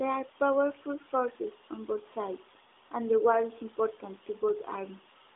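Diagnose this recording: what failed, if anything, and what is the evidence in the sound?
Nothing has failed in this recording; no stage shows a fault. The speech carries the narrowband mobile signature of an AMR codec path, with a line band of roughly 300 Hz to 3.7 kHz, nothing above about 3.8 kHz, and only light coding texture, which fits AMR-NB at its 12.2 kbps mode.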